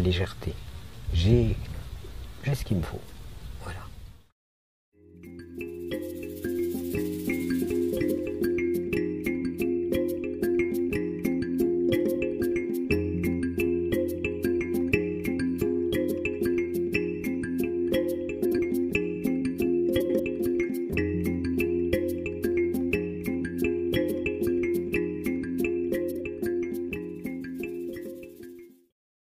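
Frames out of order occur at 18.44–18.59 s, 20.00–20.20 s and 26.11–26.20 s. Adjacent blocks of about 70, 93 and 46 ms were swapped, fitting runs of three, four and two frames. Each stretch flutters garbled, losing no time.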